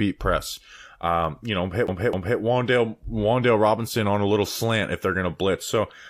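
A speech clip where, right after "you know hit", the CD is stuck on one turn from 1.87 to 2.39 s: a 258.5 ms slice repeats twice, with brief mutes at each jump. On a waveform this shows as identical repeated blocks separated by tiny gaps.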